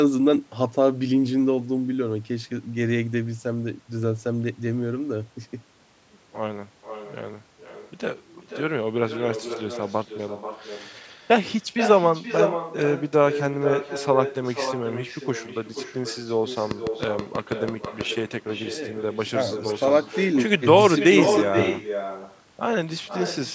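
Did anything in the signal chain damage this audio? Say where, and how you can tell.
Yes. An echo with no canceller runs through the whole clip, and it comes from the far end of the call, not from this recording. Every stretch of speech is followed about half a second later by a copy roughly 6 dB down, thinner than the original. That copy is the talker's own voice returning from a loudspeaker into the other party's microphone, uncancelled, after the network round trip.

A train of clicks runs from 16.71 to 18.02 s: about ten sharp, closely similar pulses at a steady 6.17 per second, peaking some 15 dB above the speech and audible between words as well. The regular spacing and uniform shape point to a periodic electrical fault in the analogue wiring or interface, likely interference from nearby equipment or a faulty connection or power supply. The call's microphone high-pass and the 8 kHz bandwidth ceiling are standard call processing, not damage.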